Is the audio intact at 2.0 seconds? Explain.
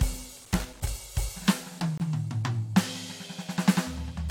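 No. A corrupt frame muted fault cuts the music to silence from 1.98 to 2.01 s. The decoder rejected one damaged compressed frame, and the player filled that 38 ms gap with silence, which fits a single codec frame. It sounds like an abrupt dropout. On a waveform it shows as a flat line with sharp edges, and on a spectrogram as a clean vertical gap.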